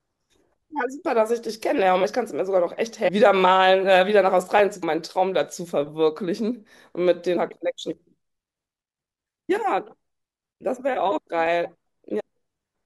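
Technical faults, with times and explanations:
1.79 to 11.47 s, clock drift buffer slips: a click recurs every 3.54 s, about four in all, while sound is present. The likely cause is two unsynchronised clocks roughly 100 ppm apart, so a buffer periodically drops or repeats a few samples.
2.03, 3.07 to 3.09, 4.82, 7.36 and 12.19 to 12.21 s, compressed frames skipped: the sound jumps ahead with a smeared blip. Whole 26.1 ms frames went unplayed, losing roughly 0.2, 0.5, 0.1, 0.1 and 0.7 s of audio respectively.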